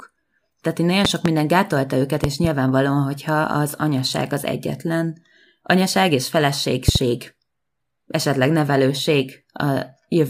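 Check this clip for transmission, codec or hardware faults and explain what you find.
There's a loud pop, a double thump each time, at 1.05–1.28 s (just before "gátolta őket"), 2.24–2.47 s (right after it) and 6.88–6.98 s (after "az egyetlen anyaság és"). A voltage spike, likely static or a switch, gets added, peaking about 20 dB over the speech, which carries on underneath.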